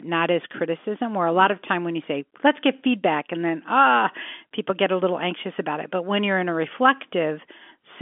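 Nothing goes wrong here; the speech simply has the narrow, phone-line sound of G.711 telephone coding, with the line band running from 250 Hz to 3.5 kHz and nothing above 3.7 kHz, which is just how that format sounds.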